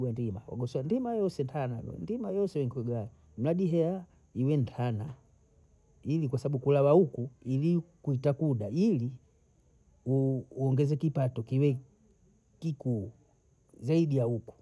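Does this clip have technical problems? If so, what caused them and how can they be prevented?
No, there are no technical problems in this recording.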